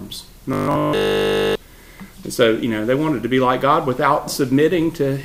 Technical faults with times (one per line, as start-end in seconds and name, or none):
0.53-1.55 robotic sound from repeated short buffers